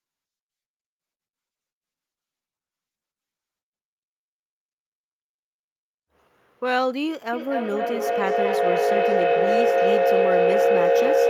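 From 7.33 s to the end, a feedback howl builds as a microphone-to-loudspeaker loop gains level on every pass. Unlike an echo, whose repeats fade, this tone around 500 Hz grows, with repeats roughly every 0.3 s, to about 8 dB above the speech.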